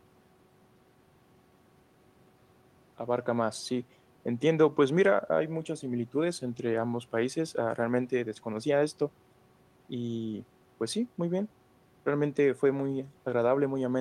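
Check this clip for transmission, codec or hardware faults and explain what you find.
No transmission, codec or hardware faults can be heard anywhere in the speech: the signal stays continuous and intact throughout.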